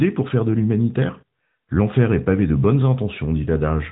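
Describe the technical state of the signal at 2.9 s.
At 2.9 s the speech carries the AMR narrowband mobile codec, present across the whole clip. Nothing passes above 3.8 kHz, and plainly audible buzzy, synthetic texture from pulse-driven vocal-tract modelling sets it apart from a simple low-pass filter. The damage fits a mid-rate mode near 10 kbps.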